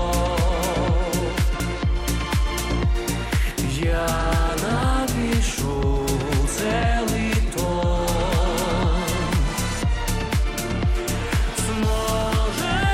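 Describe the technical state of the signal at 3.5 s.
At 3.5 s the signal is intact, with no audible fault at that point.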